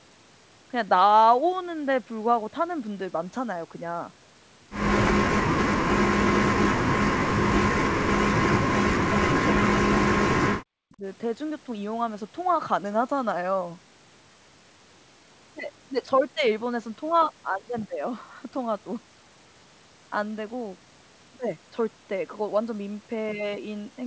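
Between 5.44 and 11.05 s the speech repeatedly sinks. This happens at 5.44–6.59, 6.9–8.43, 8.77–9.36, 9.84–10.37 and 10.94–11.05 s. Drops reach about 40 dB, the last only about 25 dB. This is likely speech suppressed in double talk: the echo canceller mistook the talker for loudspeaker echo and turned it down.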